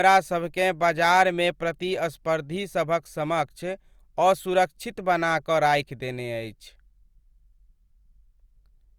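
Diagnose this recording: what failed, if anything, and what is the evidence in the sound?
Converter stage: clock slip clicks, ticks roughly every 0.15 s from 0.12 to 8.95 s, seen as evenly spaced vertical spectrogram lines. Likely unlocked clocks about 200 ppm apart.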